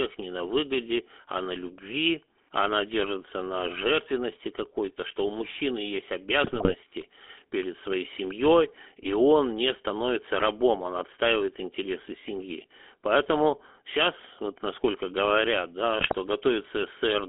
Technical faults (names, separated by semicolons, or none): GSM full-rate codec; GSM bit errors